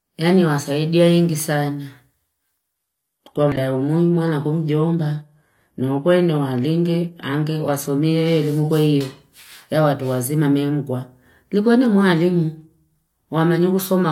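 From 2.75 s to 8.75 s the adaptive stream switched to a lower-bitrate version after the connection slowed, consistent with a step down from around 96 kbit/s AAC to a 24 kbit/s HE-AAC rendition. The speech suddenly loses its top end, with nothing above 14.9 kHz, while codec artefacts thicken. There is no gap at either switch; the quality simply changes abruptly at both boundaries.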